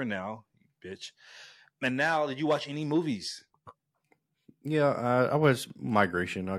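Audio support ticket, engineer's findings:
Speech clip checked by ear: no audible faults found.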